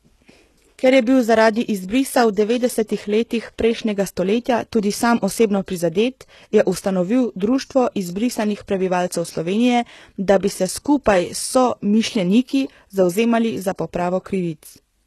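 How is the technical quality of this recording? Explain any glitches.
The recording is compromised by plainly audible codec damage from start to finish, most likely HE-AAC compression. The lower spectrum is coded normally, but the treble appears to be rebuilt by spectral band replication, which fits a low bitrate around 16 kbps. Because copied bands never line up harmonically with the real ones, s sounds come across gritty, metallic and lispy. On a spectrogram, the upper band shows blocky, smeared texture that repeats patterns from below, ending in a hard ceiling near 12.3 kHz with nothing above it.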